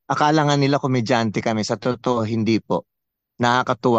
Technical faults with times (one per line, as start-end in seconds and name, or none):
none